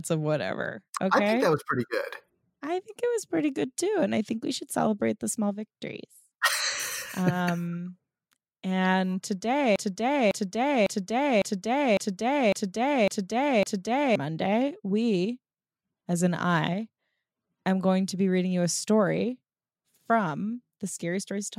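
The player or stream likely stalled at 9.76 s and kept resending its last buffered fragment, a broken-record loop: a 0.55 s piece of speech repeats exactly, back to back, eight times until 14.16 s, and the speech that belonged there is lost.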